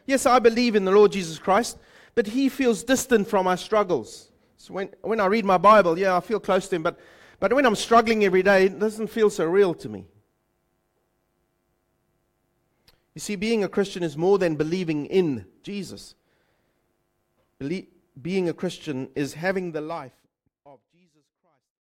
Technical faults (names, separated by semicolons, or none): none